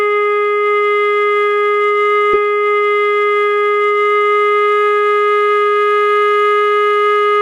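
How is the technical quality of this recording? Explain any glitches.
The music has one glitch: a stream segment repeated from 2.33 to 4.33 s. The player queued the same two-second chunk twice, so the passage replays after a small blip at the jump, visible as a seam and a duplicated waveform block.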